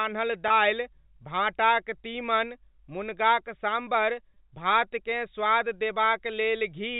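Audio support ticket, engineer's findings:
Packet loss with pitch repetition, 0.48–0.50 s and 4.34–4.36 s. Two brief held, buzzy blips, 20 ms each, which fits a single dropped packet each time. The receiver's concealment loops the last pitch period to fill the gap. Carried over the G.711 telephone path.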